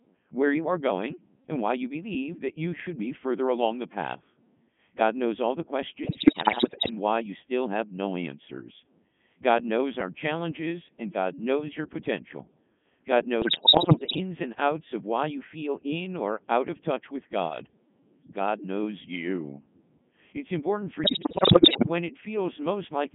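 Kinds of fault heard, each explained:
Codec 2 vocoder: The speech was carried by a very low-rate digital-radio vocoder, here at 3.2 kbit/s, which sends only pitch, voicing, energy and a spectral envelope, so the decoder rebuilds the voice from sine waves instead of keeping the original waveform. Throughout the clip the speech sounds heavily robotic and buzzy, confined to a narrow band of roughly 150 Hz to 3.5 kHz, with the natural texture of the voice replaced by a synthetic one.
bit errors on digital voice radio: Corrupted bits reached the vocoder, and because each bit steers the pitch, level, voicing or spectrum of a whole frame, an error rate of around 7 to 10 percent scrambles the rebuilt voice. It breaks into warbles, bleeps and jumps in pitch and tone at 6.04 to 6.90 s after "knows all the", at 13.42 to 14.20 s before "and outs of why", and at 21.04 to 21.88 s after "important for".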